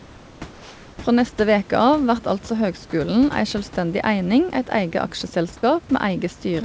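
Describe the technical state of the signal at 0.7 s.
At 0.7 s the room background is replaced by a smooth, featureless hiss about 1 dB quieter, from 0.53 to 0.98 s. This is likely comfort noise in place of the background: transmission paused in silence and the receiver synthesised roughly matching noise.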